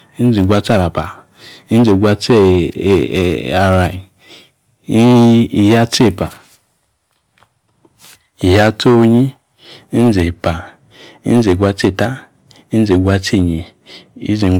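Speech with generation loss throughout: a swirly, hollow, smeared texture and blurred attacks, worse than a single MP3 pass near 130 kbit/s would give. The likely cause is about five successive MP3 encodes, each requantising on a shifted frame grid and compounding the holes, with nothing above 20 kHz.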